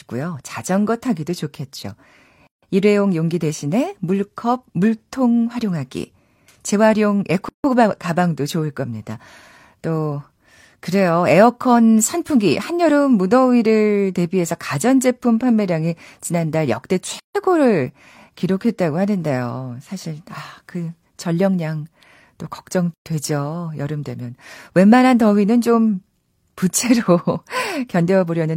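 Gaps at joins of encoded pieces interrupt the speech at 2.47, 7.49, 17.20 and 22.94 s. Each is a gap of 119 to 156 ms where separately encoded segments were spliced without trimming encoder delay and padding.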